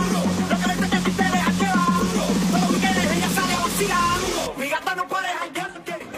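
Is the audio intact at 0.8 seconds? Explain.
No. From 0.75 to 0.80 s there is damaged data in a compressed stream: corrupted bytes make the decoder misread or reject those frames and lose sync while it hunts for the next frame header, producing a brief glitch lasting about 56 ms.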